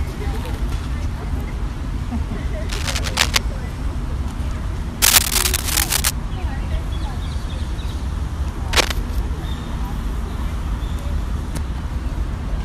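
Three bursts of cable scratch noise cut in, at 2.69 to 3.38 s, 5.02 to 6.11 s and briefly at 8.72 to 8.94 s. Each is a dense, uneven crackle and rustle laid over the sound, roughly level with it in the first burst and somewhat louder than it in the other two. The likely cause is a worn cable, connector or control being moved, so that its contact resistance jumps about rapidly while it shifts.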